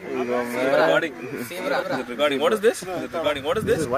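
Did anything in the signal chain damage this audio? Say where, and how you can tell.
Yes. The whole clip carries a doubled audio track, most likely from a second, slower capture path or an edit that left two copies out of step. A full-band duplicate trails the original by roughly a second and sits about 5 dB lower. It has no decay and no room colouring, which is what separates it from a real echo. Every sound returns as a clean, slightly quieter repeat a beat later.

The compressed stream also has damaged data at storage or transport, heard at 1.81 s and again at 3.84 s. At those points the decoder misreads corrupt frames, loses sync and hunts for the next valid frame header. Each fault is heard as a brief chirp or blip.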